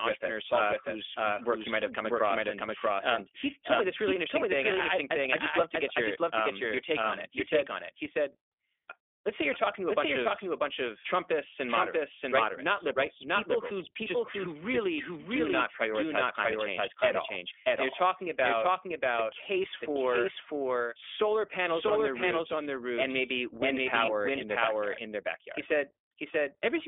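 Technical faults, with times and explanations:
throughout, doubled audio track: every stretch of sound returns about equally loud roughly 0.7 s later, dry and full-band, likely from a second, slower capture path.
throughout, iLBC codec: the sound is rough and slightly synthetic, with nothing outside about 300 Hz to 3.5 kHz, as iLBC codes each 20 ms frame separately within a narrow band.
24.06–24.09 s, lost iLBC frames: a brief buzzy, held-vowel patch of about 20 ms, pointing to a single lost frame that the decoder filled by repeating the last pitch cycle with noise.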